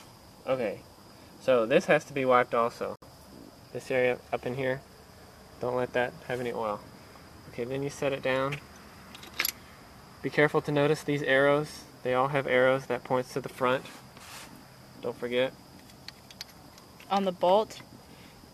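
At 2.96 s the sound drops out for 64 ms, resuming at 3.02 s: a gap at a join of encoded pieces. Separately encoded segments were spliced untrimmed, leaving encoder start delay and final-frame padding as silence. Edges are codec-smeared, and the sound continues where it stopped.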